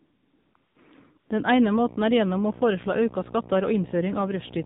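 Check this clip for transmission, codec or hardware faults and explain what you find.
Three faults are audible: narrowband mobile coding across the whole speech clip, comfort noise in three early pauses, and a display buzz from 1.5 s to the end.

AMR narrowband mobile codec, throughout: the speech passed through an 8 kHz mobile coder that rebuilds the voice from a vocal-tract model and a few excitation pulses per subframe. Nothing above 4 kHz survives, and the voice sounds plainly buzzy and synthetic, which fits a low mode around 7.4 kbps.

AMR comfort noise, 0.00–0.54 s, 0.56–0.76 s and 1.18–1.30 s: during these gaps the phone judged the talker silent and stopped sending speech frames. The receiver substituted smooth synthetic noise from a coarse level-and-spectrum description, so the background turns steady and switches in and out.

Video or display buzz, 1.54 s to the end: a screen or video cable is coupling into the audio. 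It produces a buzz at the 60 Hz field rate with hash above it, sitting roughly 20 dB below the speech and continuing to the clip's end.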